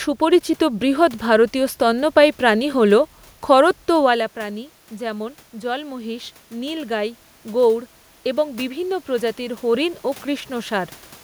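From 4.47 s to 7.27 s the voice and the room noise behind it swell up together, slowly, over nearly three seconds. This is automatic gain rising. Shortly before, around 4 s, the talker moved away and the level reaching the microphone fell by about 14 dB. The gain control read that as too quiet an input and raised its gain by about 5 dB, lifting the background along with the voice.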